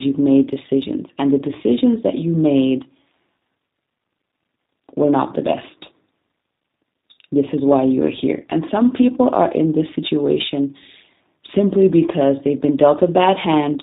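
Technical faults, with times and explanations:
Throughout, tandem speech coding: the speech has passed through two speech codecs in a row, each re-encoding the already degraded output of the one before, so roughness and a muffled, warbly quality build up beyond what either alone would produce. The sound fits a waveform coder like G.726 ADPCM followed by a model-based 8 kbit/s coder like G.729A. On a spectrogram, nothing appears above about 3.8 kHz and harmonics look smeared; the waveform shows noisy fine detail.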